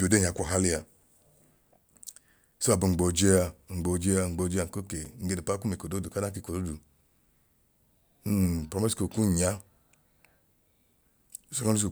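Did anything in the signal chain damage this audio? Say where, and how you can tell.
Yes: a block of digital silence at 5.05 s, between "ngboo jẹa nko kee" and "nge d'upapa kum ekodooduka". The driver or buffer stage missed its deadline, leaving a 5 ms hole of zeros that cuts in and out with no fade, short enough to be heard as a tick or dip.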